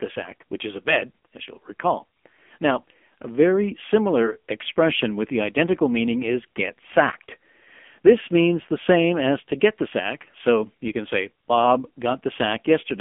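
Speech heard through the AMR narrowband mobile codec throughout: nothing above 3.5 kHz, a thin 200 Hz to 3.4 kHz band, and a heavily buzzy, synthetic texture that plain telephone filtering wouldn't add, which points to a low rate near 6.7 kbps.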